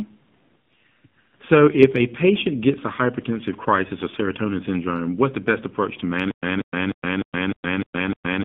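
The whole clip runs through the AMR narrowband mobile codec, and it's plainly audible: the speech sits roughly between 150 Hz and 3.5 kHz and has that buzzy, synthetic edge you get from a low mode, consistent with around 7.4 kbps, where a few pulses per subframe drive the vocal-tract model.

At about 1.09 s there's a lost AMR speech frame. The decoder filled the gap, which fits a single 20 ms frame, by reusing the last good pitch and filter settings at reduced gain, so you hear a brief dip or warble before things pick up.

From 6.31 s to the end it turns into a stutter with silent gaps. A 186 ms burst repeats every 303 ms, with 117 ms of dead digital silence in between, seven times over. That points to a player or stream that likely stalled and kept replaying its last fragment, and whatever should have played there is gone.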